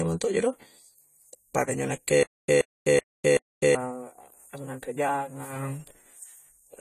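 A speech clip carrying AAC compression damage throughout: the sound is dull and smeared, with a warbling, fizzy edge on sibilants, and nothing above 14 kHz. A spectrogram shows a hard ceiling there and holey upper bands. The likely cause is AAC-LC at a low bitrate, which fits about 32 kbps. From 2.23 to 3.75 s, just after "pada injo", there is a stutter with silent gaps: a 128 ms fragment repeats four times, each followed by 252 ms of digital silence, a 380 ms cycle. On a waveform this appears as identical blocks separated by flat lines. This was likely a stalled stream replaying its last fragment, so the audio for that span is lost.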